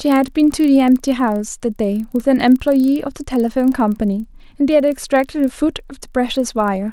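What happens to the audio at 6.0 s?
At 6.0 s the resampler restarted on every block, as it does throughout the clip. Each 40 ms block is converted in isolation, consistent with upsampling 24 kHz to 48 kHz, so edge errors produce a 25 Hz buzz-like ticking under the speech. A spectrogram would show faint vertical stripes every 40 ms, and the waveform would show small discontinuities at the block boundaries.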